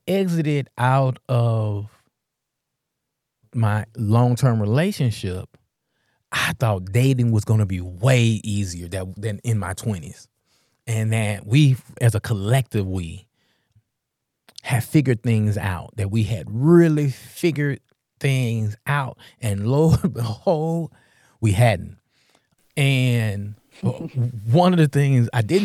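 Listening through the speech, nothing stood out as a technical fault at any point.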